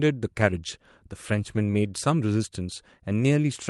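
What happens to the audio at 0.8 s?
Nothing goes wrong at 0.8 s; the speech carries on intact through that moment.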